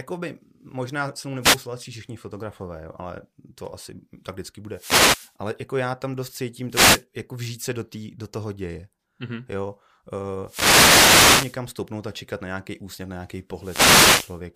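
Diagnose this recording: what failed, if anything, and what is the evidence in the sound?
The failure is in the radio link of an analogue FM wireless microphone, ahead of any digital stage: a wireless microphone noise hit, five times. Bursts of static swish over the speech at 1.41–1.58 s (after "se mnou"), 4.70–5.35 s, 6.69–7.04 s (after "já tam dost cítím"), 10.43–11.61 s and 13.54–14.43 s (after "nějaký úsměv na nějaký"). As reflections cancel the carrier, receiver hiss rises and masks the voice. Unlike network packet loss, the gaps fill with noise rather than silence or repeated fragments.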